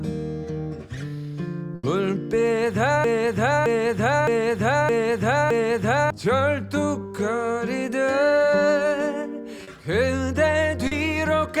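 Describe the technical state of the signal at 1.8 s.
A burst of packet loss spans 1.75–1.86 s: the last sound is continued for about 80 ms and fades, showing as smeared, decaying spectral bands, then jumps ahead with 80 ms missing.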